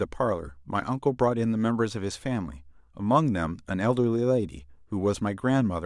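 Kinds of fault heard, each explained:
No technical faults can be heard in this speech.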